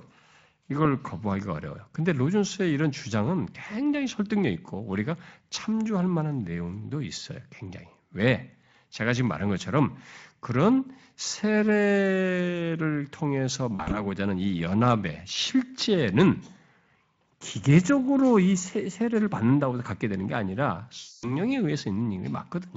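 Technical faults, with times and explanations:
13.75 to 14.0 s and 20.99 to 21.35 s, VoIP packet loss concealed by the speech codec: the decoder fills the gaps by stretching its last pitch and filter at falling gain, into a buzzy tone or fading coloured noise. The first gap is 100 ms scattered over 160 ms in runs of up to 40 ms, and the second is 240 ms.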